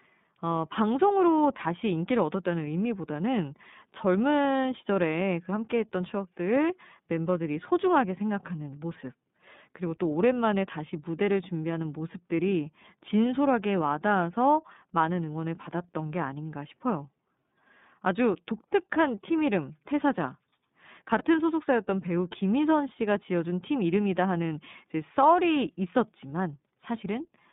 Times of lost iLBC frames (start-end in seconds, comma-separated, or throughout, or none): 21.18-21.25